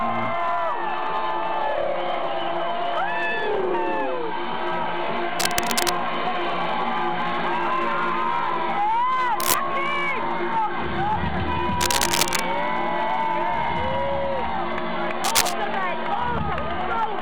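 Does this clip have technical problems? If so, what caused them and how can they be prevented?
Yes, there's cable scratch noise at 5.39–5.90, 9.39–9.55, 11.81–12.43 and 15.24–15.53 s: gritty rustling bursts roughly as loud as the sound itself, likely from a worn connector or lead shifting and flickering its contact. Replace or reseat that cable and keep it still.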